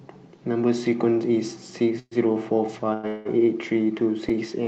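At 1.99 s, 2.93 s and 3.07 s the speech stalls into a fading buzz lasting 0.12, 0.10 and 0.18 s, the first trailing into brief silence. It then resumes intact but later. This is a call audio freeze, likely from delayed packets draining the jitter buffer.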